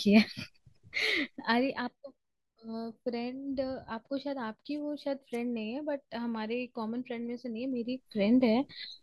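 Speech with zipper noise in two places: a drop in level of roughly 10 dB from 1.16 to 1.9 s, and a rise of about 10 dB from 7.64 to 8.18 s. Each change is made in coarse steps, around fifty a second, with no smoothing, so every step clicks and the ramp carries a fine buzzy ticking. A properly smoothed fade moves the level just as far but stays silent.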